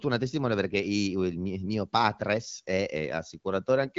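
No technical faults can be heard at any point in this speech clip, which comes through the AMR wideband (HD Voice) codec at 12.65 kbit/s.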